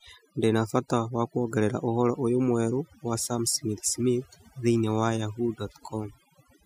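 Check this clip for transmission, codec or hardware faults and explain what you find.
Overdone noise removal runs through the whole speech clip. A noise reduction stage set far too aggressively pulls individual frequency bands down or out whenever they sit near its noise estimate, taking quieter parts of the voice with them, so gaps fall near-silent with twinkling specks.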